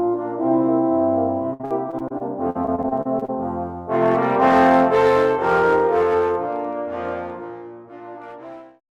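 From 1.53 to 3.30 s there's a burst of repeated packet loss. Well over a dozen short holes, the longest about 60 ms, get papered over by stretching the previous sound, so roughly a quarter of that stretch is patched over and the sound turns choppy.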